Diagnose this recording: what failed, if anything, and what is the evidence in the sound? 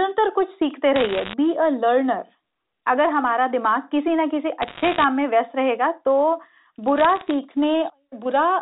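Bit errors on a digital phone line at the transmission stage cause bursts of sharp ticks and crackle at 0.96–1.34 s, 4.62–5.04 s and 6.98–7.31 s, with the last burst sparser. Each flipped bit corrupts one 8-bit A-law sample, so the waveform shows isolated single-sample spikes and the spectrogram shows thin vertical broadband streaks over intact speech.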